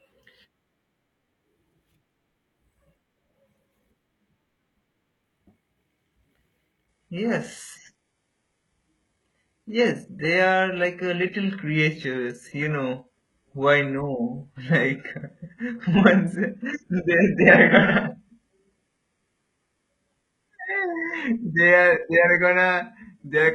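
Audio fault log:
6.88–23.55 s, adaptive stream at a lower bitrate: at 6.88 s the speech drops abruptly into a thinner, more processed sound with no gap at all, and stays that way to the end. There's nothing above 11.5 kHz, which fits the player switching from a decent AAC stream to a low-rate HE-AAC one, somewhere near 12 kbit/s, after the connection slowed. Codec artefacts rise too.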